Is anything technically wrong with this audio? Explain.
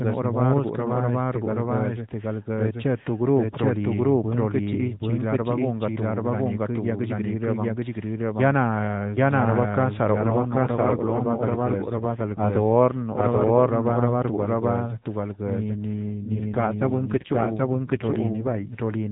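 Yes, there are two faults. Throughout the clip, a doubled audio track makes every phrase come back about as loud as the original, around 0.7 seconds later. The repeat has the full bandwidth, no decay and no room colour. The likely cause is the same signal being captured a second time through a slower path, or an edit leaving two copies out of step.

An AMR rate drop happens twice: from 10.22 to 13.61 s, and again from 15.94 to 18.80 s, just after "to balguezə ni ni". In both spans the speech turns rougher, buzzier and more synthetic, with no gap and no change in bandwidth. This points to the narrowband mobile codec being pushed from 12.2 kbps down to around 5.9 kbps, so fewer bits describe each frame until the rate recovers.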